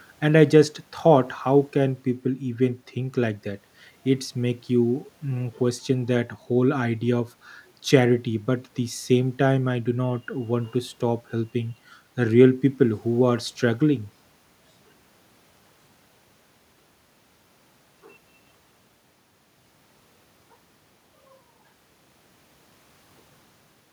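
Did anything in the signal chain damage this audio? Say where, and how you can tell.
No, nothing in the signal chain has damaged this speech recording. The only background is the room noise picked up at the microphone, sitting about 42 dB below the speech, which belongs to the recording itself.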